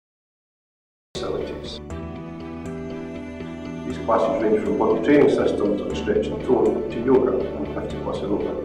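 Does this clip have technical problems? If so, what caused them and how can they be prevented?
Yes. The clip has a cut-off start: it is digital silence from 0.0 to 1.15 s, and the audio then begins abruptly in the middle of a sound, with no natural attack or fade-in. This happens when the recording or stream starts after the sound has already begun. Starting capture earlier, or keeping a short pre-roll buffer, prevents it.

Hard clipping affects three loud passages. From 4.82 to 5.47 s the signal exceeds the maximum level by about 5 dB, briefly at 6.53 s by about 1 dB, and from 7.12 to 7.18 s by about 3 dB. At those points the peaks are cut flat, adding harsh upper harmonics that are heard as crackle or fuzz. Lowering input gain to leave headroom above the loudest peaks prevents it.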